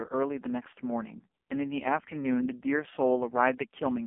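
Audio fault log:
Throughout: AMR narrowband mobile codec. The speech has the boxed-in sound of a phone line, confined to roughly 250 Hz to 3.4 kHz with nothing at all above 3.5 kHz, and it comes across heavily buzzy and synthetic. That fits AMR-NB at its bottom rate of about 4.75 kbps, where the codec rebuilds the voice from a vocal-tract model fed by only a handful of pulses each frame, so the natural texture is lost.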